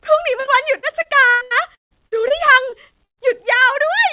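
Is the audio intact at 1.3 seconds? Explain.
No. At 1.3 seconds the sound is choppy and robotic, with pieces dropping out, inside a stretch of repeated packet loss from 0.4 to 3.2 s. Over a dozen holes, the longest about 158 ms, are patched by extending the previous sound.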